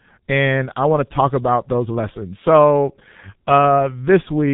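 Throughout the clip the speech has passed through the G.723.1 codec at a very low bitrate, consistent with its 6.3 kbit/s mode. The codec rebuilds speech from a slowly updated model in 30 ms frames and passes nothing above 3.8 kHz, so the speech is heavily muffled and hoarse, with smeared consonants.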